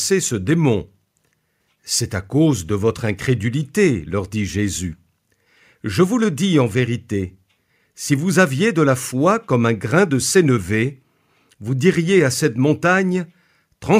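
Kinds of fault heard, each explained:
Nothing stood out on listening to the recording.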